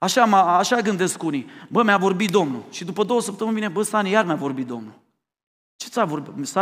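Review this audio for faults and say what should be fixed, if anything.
Nothing needs fixing; no faults can be heard here.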